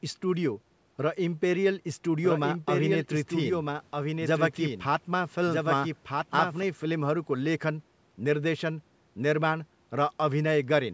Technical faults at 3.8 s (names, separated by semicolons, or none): doubled audio track